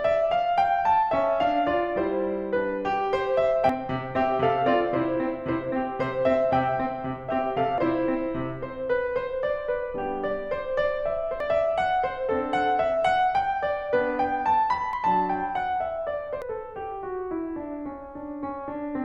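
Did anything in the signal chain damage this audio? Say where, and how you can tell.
Yes, compressed frames skipped at the codec or storage stage. Whole frames were missing or rejected by the decoder, so the music jumps ahead at 3.69, 7.78, 11.40, 14.93 and 16.42 s. The jumps lose about 0.3, 0.3, 0.7, 0.5 and 0.4 s, which fits frames of about 93 ms.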